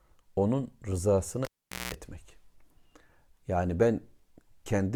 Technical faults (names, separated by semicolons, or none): cable pulled and plugged in